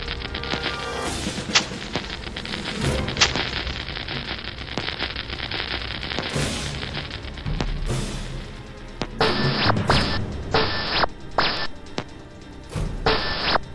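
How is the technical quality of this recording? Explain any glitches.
No glitches turn up anywhere in the recording. It has no dropouts, breaks or other audible faults to explain.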